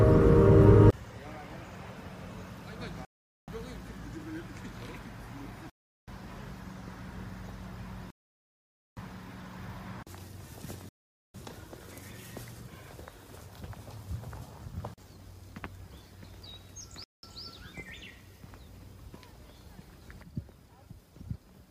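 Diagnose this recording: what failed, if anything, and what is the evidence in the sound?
Five dropouts to silence occur on the wireless playback link, at 3.05 s (0.43 s), 5.70 s (0.38 s), 8.10 s (0.87 s), 10.89 s (0.45 s) and 17.04 s (0.19 s), each followed by resumed sound. This is likely a Bluetooth stall: delayed packets emptied the receiving buffer, halting output until retransmissions arrived.

At 20.23 s the sound and its noise floor drop together by about 5 dB in one step, holding at that level to the end. This points to a sudden gain jump in digital processing, likely a gain change applied instantly rather than ramped.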